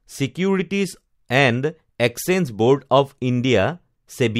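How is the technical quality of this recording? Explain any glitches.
The technical quality of the recording is sound, with no glitches to explain.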